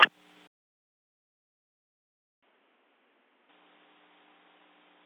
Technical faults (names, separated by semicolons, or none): input switched to a poorer device